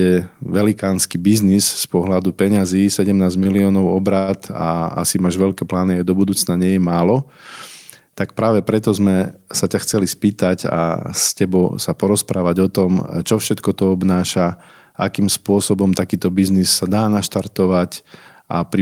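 At 3.43 s the speech halts briefly in a short stall from a late packet: the jitter buffer ran dry, and the receiver held the last sound until the packet turned up. This added about 21 ms of delay through to 3.63 s. A second stall from a late packet follows at 4.19 to 4.31 s with a longer 93 ms fill. In both cases nothing is lost, but a sound lingers too long with a faint buzz or dip.

From 9.94 to 10.77 s a jitter buffer speed-up takes place. The buffer had built up more audio than its target, so the receiver repeatedly trimmed short pitch-period slices, removing something like 70 ms in total. Playback runs at 106 percent speed with the pitch unchanged, and the speech sounds slightly hurried across that stretch.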